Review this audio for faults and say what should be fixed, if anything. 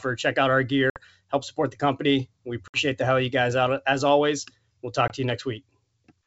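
Packet loss on an ADPCM call occurs three times. At 0.90–1.00 s, between "out our" and "help support the company", about 60 ms of audio drops to silence. At 2.68–2.81 s, just before "the hell you guys", another 60 ms disappears. At 5.08–5.12 s, between "always we'll" and "to you", a 20 ms gap corresponds to roughly a single packet. Each hole has hard edges. Because the receiver's adaptive predictor and step size lose track of the sender's, the sound resumes with brief, slight distortion before realigning. The G.722 coding at 64 kbit/s carries the wideband sound cleanly between gaps. To prevent this, add a jitter buffer with packet loss concealment and reset or resynchronise the ADPCM decoder state after detected losses.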